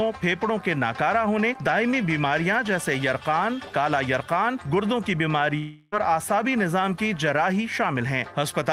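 At 5.57 s the sound smears into a fading buzz that fills about 0.35 s with no true silence, then picks up at 5.94 s with roughly 0.34 s skipped. That's likely a long network dropout, with the receiver stretching the last audio across the gap.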